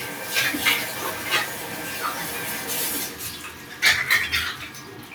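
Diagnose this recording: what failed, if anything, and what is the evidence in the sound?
A noise suppressor applied to these sounds failed at the call-processing stage throughout: sustained parts and tails sink by around 5 dB while attacks pass, so the audio pumps. A spectrogram shows fading tails and patchy steady bands; the waveform envelope breathes.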